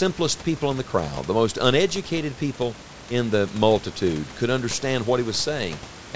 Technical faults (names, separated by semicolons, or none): none